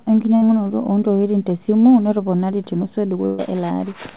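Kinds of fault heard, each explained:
Burst of packet loss: a run of packets arrived too late or not at all, so the receiver stretched the last sound, faded it, and then jumped ahead. At 0.36 s, just before "oo ntokitin tesimu notoponari", 54 ms are filled and 60 ms lost. At 3.26 s, after "ntokitin tesimu notoponari tenusu", 128 ms are filled and 120 ms lost. On the spectrogram, already empty above 4 kHz, smeared repeating bands decay into an abrupt restart; the waveform shows a shrinking repeated cycle.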